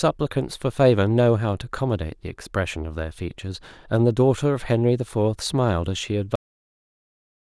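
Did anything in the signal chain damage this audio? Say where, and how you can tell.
Yes, a cut-off end: at 6.35 s the speech stops mid-sound and drops straight to digital silence with no decay. The final buffers were likely never written to storage.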